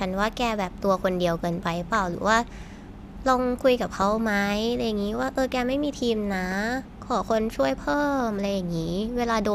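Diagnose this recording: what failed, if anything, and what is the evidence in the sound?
The failure is in the DAB receive chain, where the MP2 codec decodes the broadcast. This is DAB burbling. Two bursts stand out, from 1.82 to 2.09 s and from 6.31 to 6.55 s. The speech picks up short blips of noise. Weak reception let bit errors slip past error correction, perhaps a few in every thousand bits. Corrupted samples then put noise blips into single sub-bands. Each burst's length points to a dozen or more damaged frames.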